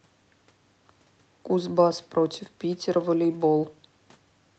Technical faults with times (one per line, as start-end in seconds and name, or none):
none